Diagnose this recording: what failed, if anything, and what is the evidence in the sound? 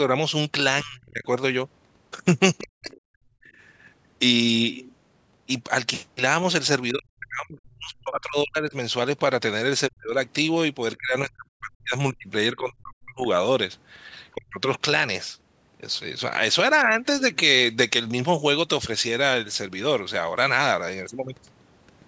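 Speech suppressed in double talk, at the call-processing stage: the speech dips sharply at 0.82–1.24 s (about 20 dB), then at 2.59–3.32, 6.91–8.74, 9.89–10.16, 10.98–13.25 and 14.34–14.58 s (about 40 dB each), the longest stretches losing well over a second. The likely cause is the echo canceller mistaking simultaneous far-end talk for echo and attenuating everything. On a waveform the envelope collapses into near-silent gaps. On the spectrogram, whose content stops at 8 kHz as normal call processing would, those spans fade to dark across the band.

The other side's voice leaking through appears briefly at 2.91–3.01 s, inside the second suppression, as a faint second voice about 30 dB below the talker. Its likely cause is residual loudspeaker echo the canceller failed to remove from the microphone path. On the spectrogram it shows as a weak, separate harmonic trace in the otherwise darkened gap. 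The waveform shows only a low ripple there.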